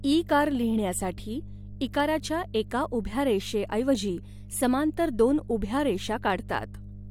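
Mains hum runs under the speech from start to finish: a steady 50 Hz tone with low harmonics, sitting roughly 15 dB below the speech. Power-line current has coupled into the signal path, most plausibly through a ground loop or a nearby transformer.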